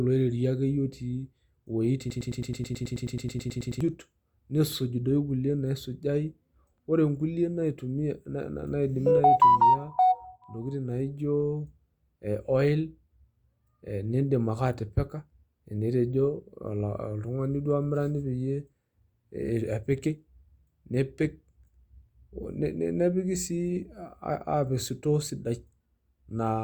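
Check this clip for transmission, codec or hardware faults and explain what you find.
One fault is present in this speech clip. From 2.10 to 3.81 s there is a broken-record loop. A 108 ms fragment repeats exactly, back to back, 16 times. This is likely a stalled player or stream resending its last buffer. The speech that should fill that span is lost, replaced by a rapid stutter.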